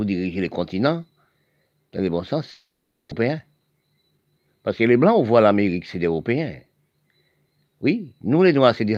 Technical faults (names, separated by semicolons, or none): long network dropout; jitter buffer speed-up